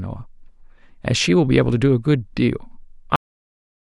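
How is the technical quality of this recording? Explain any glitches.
The recording has one clear fault, a cut-off end. At 3.16 s the speech stops mid-sound because the final buffers were never written out, so the signal falls straight to digital silence with no natural decay. On a waveform it ends abruptly in a flat line, and a spectrogram shows energy ending in a sharp vertical edge.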